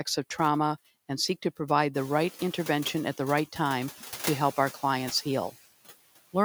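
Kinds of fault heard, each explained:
Noise suppressor artifacts: The background noise drops away in the gaps between words and comes back up underneath them, so the floor pumps in step with the speech for the whole clip. A suppressor is estimating which frequency bands hold steady noise and pulling them down frame by frame, by about 14 dB here. The room noise rises by about 14 dB around two seconds and then sits about 17 dB below the speech.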